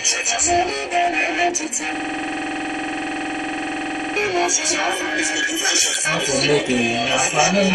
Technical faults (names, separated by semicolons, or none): MP3 compression; system hang loop; damaged data in a compressed stream